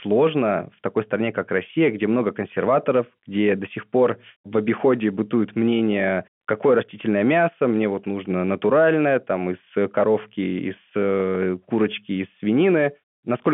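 No faults can be heard in this speech recording. It comes through G.711 telephone coding, so the sound sits in a narrow phone band of roughly 150 Hz to 3.4 kHz, with nothing above about 3.7 kHz.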